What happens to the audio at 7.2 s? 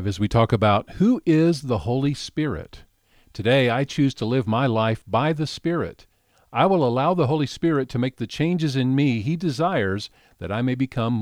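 Nothing goes wrong at 7.2 s: the speech carries on cleanly through that moment with no dropout, click, distortion or other audible fault.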